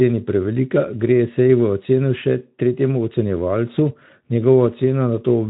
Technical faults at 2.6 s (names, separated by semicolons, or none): none